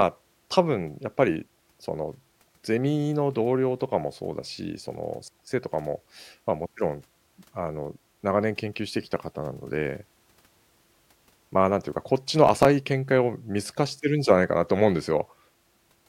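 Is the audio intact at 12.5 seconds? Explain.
No, processor overload crackle runs from 12.47 to 12.65 s. The processor repeatedly missed its deadlines for short buffers of around 5 ms, skipping several in a row, so hard-edged gaps pile up into a brief gritty crackle over the speech.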